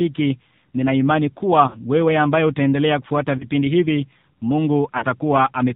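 Throughout, the speech sounds thin, buzzy and synthetic, with nothing above 4 kHz. This is AMR narrowband mobile codec damage, plainly audible. The vocal tract model is fed too few bits, which fits AMR-NB at around 7.4 kbps.

At 1.68 s, just after "nina imani", the sound smears and fades briefly before "wewe ambaye utaendelea kufuata" returns rough. These are lost AMR speech frames. The decoder repeated its last pitch and vocal tract settings at falling gain for about 60 ms, which fits three missing 20 ms frames. A shorter warble follows at 3.38 s, after "wewe ambaye utaendelea kufuata", from a single 20 ms loss. At 4.98 s, a 40 ms dip suggests two frames dropped.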